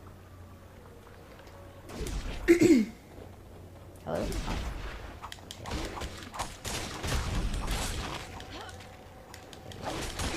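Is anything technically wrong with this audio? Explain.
No, nothing is technically wrong with this audio.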